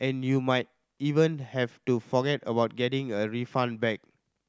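No technical faults are audible.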